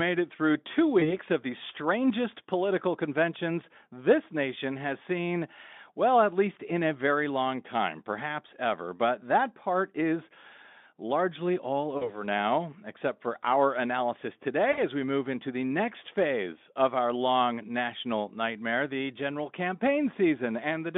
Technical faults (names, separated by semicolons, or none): VoIP packet loss concealed by the speech codec